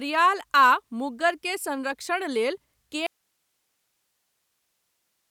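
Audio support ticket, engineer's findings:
Audio dropout to a faint residue from 3.07 s to end, right after "मुग्गर के संरक्षण लेल". Speech cuts abruptly to hiss about 50 dB down; path still live, likely upstream signal loss. Abrupt, not a fade.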